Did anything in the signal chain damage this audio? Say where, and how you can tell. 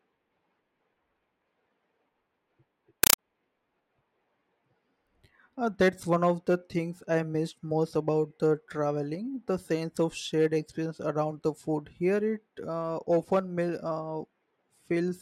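Yes. From 3.03 to 3.18 s the speech gives way to very loud, chattering static: a compressed stream played as audio. The static pulses at 31.25 Hz in 5.33 ms noise bursts, which fits an AC-3 bitstream passed undecoded over a digital link and read as ordinary samples.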